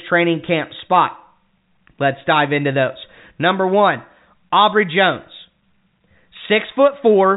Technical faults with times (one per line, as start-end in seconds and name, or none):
none